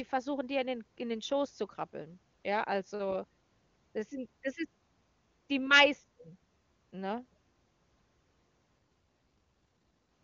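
From 8.77 to 10.11 s the speech turns rougher and more synthetic with no gap or narrowing, an AMR rate drop, which fits a fall from 23.85 to 8.85 kbit/s.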